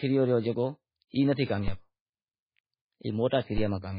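Throughout, the speech has lost all treble. Nothing is left above 5 kHz. The sound is watery and swirling, and s sounds turn metallic. This is heavy MP3 compression damage, likely from a very low bitrate around 16 kbps. Weak frequency lines flicker between frames.

At 1.68 s there is a DC step. The waveform's zero line jumps suddenly, and a low thump is heard. The offset then fades away within a few tens of milliseconds, as a 5 Hz high-pass would drain it. A second identical step follows at 3.58 s.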